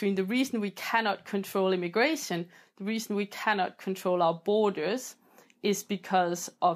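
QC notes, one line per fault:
Nothing stood out on listening to the speech here.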